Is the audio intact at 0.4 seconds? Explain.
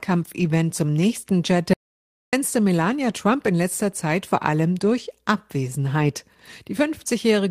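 No. From 0.39 to 0.45 s the speech passes through a lost packet rebuilt from error correction. About 40 ms of audio, which fits two dropped 20 ms packets, was restored from the low-bitrate backup copy that the following packet carried. Continuity holds, so there is no gap or dropout, but that stretch sounds briefly rougher and noisier. Ordinary loss concealment differs: it guesses the missing audio from what came before and tends to leave a smeared, buzzy or fading patch.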